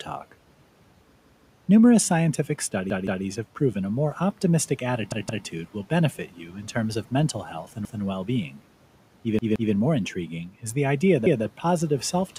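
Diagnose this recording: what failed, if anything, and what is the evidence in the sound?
A stuttering repeat of a chunk of about 171 ms, with a hard join each time, is heard at 1.20–1.54 s, 2.90–3.24 s (just before "have proven a more"), 5.12–5.46 s (between "proven a more optimistic" and "will benefit") and 9.39–9.73 s (before "more intriguing is the"), where the chunk plays three times. At 7.85–8.02 s and 11.26–11.44 s it plays twice. This is a repeated buffer at the driver or buffer stage: new audio arrived late, so the device replayed its last block. The length fits an 8192-sample buffer, and no speech is lost.

Speech turns briefly faint and swallowed at 6.27–6.54 s, dipping by about 9 dB, and again at 8.50–8.60 s, by about 8 dB. Each loss is only about a tenth of a second. This is speech cut by the noise suppressor in call processing. It misjudged those quiet speech moments as background and pulled them down along with the room noise, which itself sits about 25 dB below the speech.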